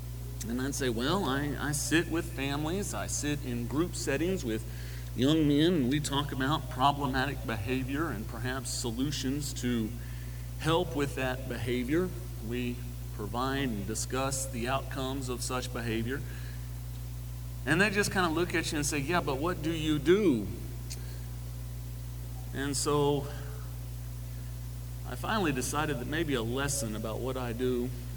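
No technical faults can be heard anywhere in this audio. There is no moment in it that stands out as a problem.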